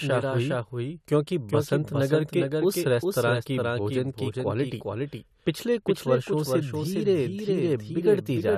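Speech, with a doubled audio track running throughout: a second, full-band copy of the same sound trails the original by roughly 0.4 s at about 5 dB lower. Unlike a room echo or reverb tail, this copy arrives once, with no decay, no further repeats and no added room colour. It is simply the same signal laid back on top. The likely cause is the audio being captured a second time through a slower path and mixed in.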